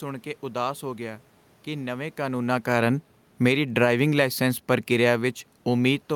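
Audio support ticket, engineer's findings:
Automatic gain falling, 2.21 s to end, after "ਹੋ ਗਿਆ ਕਿ ਨਵੇਂ": AGC judged input too loud or noise too strong, gain eased down gradually; voice and room noise sink together.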